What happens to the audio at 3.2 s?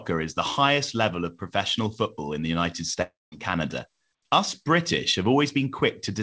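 From 3.02 to 3.35 s the speech drops out, likely a long network dropout. The last sound fades as a buzz or hiss, then silence. Speech resumes missing about 300 ms.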